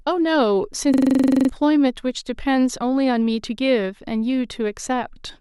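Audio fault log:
0.94–1.49 s system hang loop: 23.4 Hz stutter, one 42.7 ms slice repeating 13 times; frozen system replayed ring buffer, losing about half a second.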